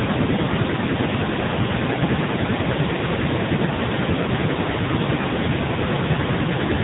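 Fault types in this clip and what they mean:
AMR narrowband mobile codec: The speech has been squeezed through the old 2G/3G phone codec, so nothing above 4 kHz survives and the voice comes out buzzy and synthetic, heavily damaged in a way that fits one of its lowest modes, around 5.9 kbps.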